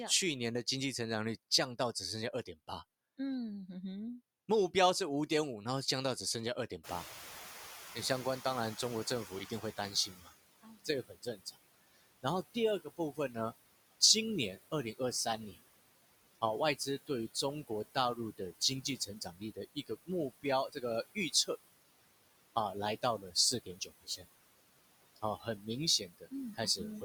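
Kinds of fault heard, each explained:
noise suppressor artifacts: Throughout the clip a noise suppressor pulls down every frequency band it judges to be steady noise, updating frame by frame, with about 19 dB of reduction. The background drops away in the gaps between phrases and comes back up underneath the speech whenever the talker is active, so the noise floor pumps in step with the speech rather than sitting still.
noise suppressor catching up: Around 7 s the room noise jumps by about 22 dB, settling about 16 dB below the speech. The suppressor's noise estimate trails that jump, so from 6.83 to 10.23 s the louder background passes with only about 14 dB of reduction. It then sinks gradually as the estimate adapts over roughly 3.4 s, rather than being cleared at the moment of the rise.
speech cut by the noise suppressor: The suppressor misreads parts of the speech as noise and turns them down with the background, so soft consonants, word endings and quieter stretches sound swallowed. 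This happens at 9.27 to 14.02 s (drops to about 21 dB, around 1.5 s affected in total), 14.72 to 15.57 s (about 11 dB, a very brief moment), 16.41 to 21.49 s (about 21 dB, under a second), 23.02 to 24.25 s and 25.16 to 27.03 s (about 20 dB, roughly half a second each).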